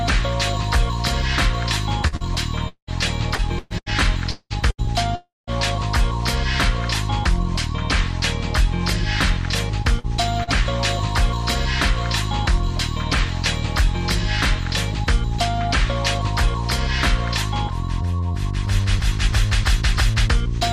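At 2.07 to 2.15 s a burst of packet loss leaves about 40 ms missing. The receiver extends the last sound and fades it, giving a brief held buzz or hiss before the audio resumes slightly further on.

Right after, at 2.16 to 2.23 s, a short concealed packet loss drops another 40 ms. The decoder patches it by continuing the preceding sound and blending back in, so it registers as a quick smear or wobble rather than a clean gap.

From 2.68 to 2.90 s the sound stretches into a fading buzz or hiss, then about 80 ms of silence, and returns with roughly 200 ms gone. This is likely a long network dropout, where nothing arrived and concealment ran out.

Between 3.35 and 3.94 s, and again between 4.31 and 4.90 s, repeated packet loss produces a robotic sound. Four gaps hit each stretch, up to 118 ms and 190 ms long, and patching covers about 40% and 48% of the spans. The result is choppy.

At 5.15 to 5.50 s a second long network dropout likely removes about 320 ms. 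The tail fades and then falls to about 170 ms of silence before the audio picks up again.

Two more short concealed packet losses occur at 9.99 to 10.07 s and 10.44 to 10.50 s, each about 40 ms missing. Both are heard as brief smears.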